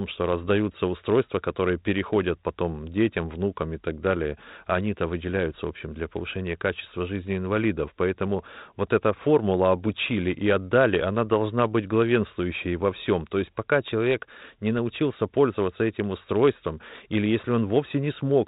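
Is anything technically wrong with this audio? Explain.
No, nothing is wrong: the speech has gone through G.726 ADPCM at 32 kbit/s, the usual DECT rate, which leaves it band-limited to 4 kHz with only the light coding noise expected at that rate.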